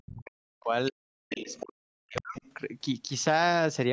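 From 0.04 to 0.73 s and again from 0.9 to 2.38 s, the talker's speech sinks and breaks up, at its deepest about 40 dB down, in speech suppressed in double talk. The likely cause is an echo canceller that could not tell the talker from the loudspeaker echo while both sides spoke, so it turned both down.

At 1.48 to 1.64 s and 2.15 to 2.52 s, a faint second voice, about 15 dB below the talker, comes through in short scraps. This is the other side's voice leaking through, likely because the echo canceller left part of the loudspeaker playback in the microphone signal.

Between 3.27 and 3.45 s, two sharp loud pops, about 10 dB above the speech, sit on top of it while the speech carries on underneath. They likely come from a sudden voltage step or pulse, such as a plug, a switch or static, entering the signal path.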